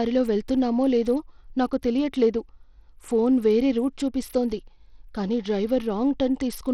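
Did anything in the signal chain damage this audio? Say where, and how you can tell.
Yes, at the codec stage: the whole speech clip has a gritty, grainy edge, and the treble keeps thinning out and flickering, likely Bluetooth SBC compression. That fits a starved bit pool, around 80 kbps, leaving the top sub-bands with almost no bits and everything else coarsely quantised.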